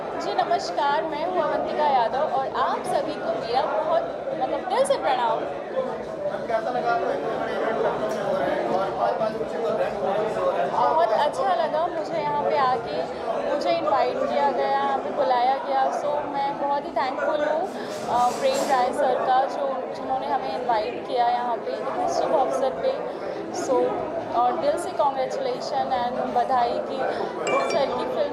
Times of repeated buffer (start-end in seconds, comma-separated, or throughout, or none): none